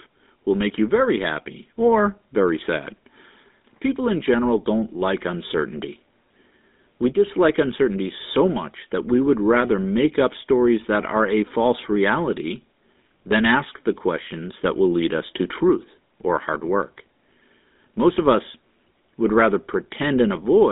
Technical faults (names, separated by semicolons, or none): GSM full-rate codec